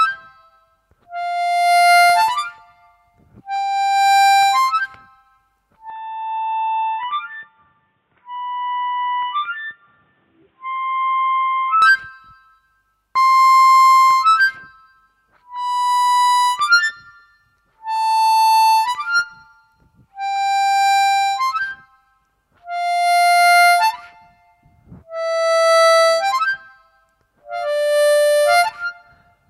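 Input switched to a poorer device, from 5.9 s to 11.82 s: the sound abruptly turns dull and boxy, with nothing above 3.8 kHz, drops by about 5 dB and carries a faint new background noise sitting far below the signal. The change happens with no gap. The likely cause is the recording input jumping to a narrower-band microphone or headset profile, whose limited bandwidth, different gain and own noise floor replace the original path until the full sound returns at 11.82 s.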